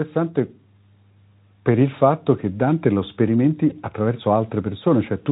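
At 3.69 to 3.73 s, VoIP packet loss concealed by the speech codec: a gap fitting one lost 20 ms frame is filled by extrapolation, leaving a brief buzzy or noise-like smear in the speech.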